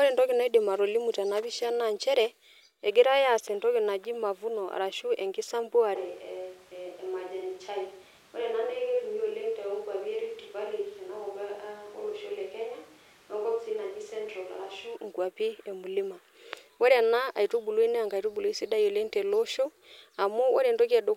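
From 5.97 to 14.95 s the speech turns abruptly roomy and thin, likely a switch to a distant microphone: the waveform sits about 5 dB lower and the spectrogram loses bass.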